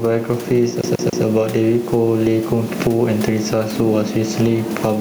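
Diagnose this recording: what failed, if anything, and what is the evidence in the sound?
Gain pumping runs through the whole clip. The room noise sits about 29 dB under the speech. The level swings by roughly 10 dB, and loud and quiet passages sit unnaturally close together. The likely cause is input gain set far too hot at the microphone stage, with a fast limiter or compressor in the processing chain clamping down on every peak and releasing in the gaps.

CD stuck on one turn appears from 0.81 to 1.24 s. The same 142 ms slice of speech plays three times in a row, with a brief mute at each jump, which gives the quick, even stutter of a skipping disc. This is a storage and playback failure. A scratch keeps knocking the laser back one track at the same point on each revolution, so the player re-reads one turn's worth of audio before it finally tracks past the damage.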